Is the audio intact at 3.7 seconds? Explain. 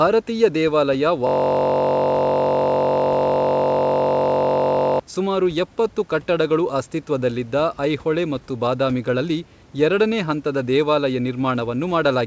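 No. At 3.7 seconds the audio sits inside a system hang loop running from 1.27 to 5.00 s. The computer or its audio driver stalled, and the sound hardware kept replaying the same 21.33 ms slice of its ring buffer, which fits a 1024-sample buffer, well over a hundred times. Because the slice is so short, the repetition fuses into a steady buzz at about 46.9 Hz instead of a stutter. Normal sound resumes with "ಸುಮಾರು ಎಪ್ಪತ್ತು ಕಟ್ಟಡಗಳು ಅಸ್ತಿತ್ವದಲ್ಲಿದ್ದ".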